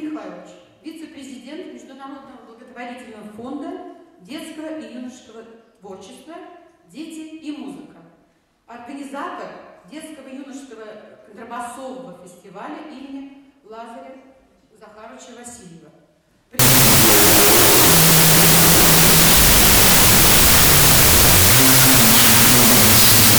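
At 16.59 s the audio turns into loud, harsh noise and stays that way through 23.39 s, with the original sound just barely audible underneath, running at half speed and about an octave low. That's a wrong sample width: the data are being read with fewer bytes per sample than they were written with, which fits 32-bit float samples read as 16-bit integers. Each real sample gets split into two bogus values, so most of what you hear is byte garbage, and the doubled sample count halves the speed.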